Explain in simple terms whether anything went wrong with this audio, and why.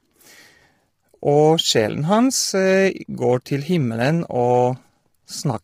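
Yes, something went wrong: across the whole clip the speech sounds rough and grainy, with a hiss between the voice's tones and a dull or artificial-sounding top end. This is heavy damage from what is likely low-delay AAC compression, whose short frames capture voice detail poorly at low data rates.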